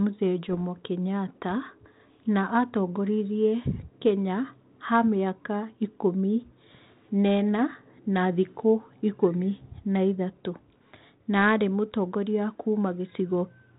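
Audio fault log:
0.49–0.61 s, bit errors on an ADPCM link: brief pops and rough, gritty bursts with sudden level jumps. Roughly one bit in a thousand flips. Each error corrupts the decoder's step size and predictor, so the damage rings on for milliseconds.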